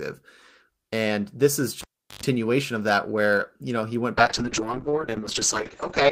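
A speech clip with two faults. At 1.81 s, just after "this is", the cable is pulled and plugged in: a pop, then about 0.37 s of near silence, then roughly 0.1 s of 50 Hz mains buzz while only the connector tip makes contact, and a second pop at 2.23 s as the signal returns before "of that where you". The buzz comes from the unshielded, half-seated contact picking up mains hum before the ground connects. From 4.19 s, after "you know he went", a call bitrate drop sets in and lasts to the end of the clip. The sound turns coarse and watery, and the top end is cut off at about 8 kHz instead of extending to 20 kHz. This is the encoder working with far fewer bits after the call's bandwidth estimate fell, which fits a drop from around 32 kbps to around 7 kbps. It holds at that lowest rate for about 1.9 s.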